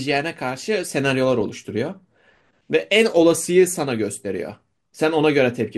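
Dull, band-limited speech with a gurgling, granular edge runs through the whole recording, as if the upper frequencies were switched off and what remains were crudely rebuilt. This is plainly audible MP2 compression, likely from MPEG Layer II coding at a bitrate around 80 kbps, which leaves too few bits for its 32 sub-bands, so upper bands drop out and the surviving ones are coarsely quantised. At 1.41 s a brief patch of watery blips cuts across the speech, a moment of DAB burbling. A very small share of bit errors slipped past error correction into the audio data, corrupting samples across a few frames so that individual sub-bands carry short blips of noise.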